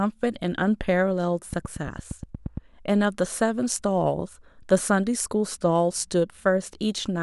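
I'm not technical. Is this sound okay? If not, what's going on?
No. From 1.53 to 2.58 s there's a train of clicks: about ten evenly spaced ticks, roughly 8.6 per second, over the speech. Their steady, matching rhythm sets them apart from random crackle. It's likely interference from nearby equipment or a faulty connection or power supply.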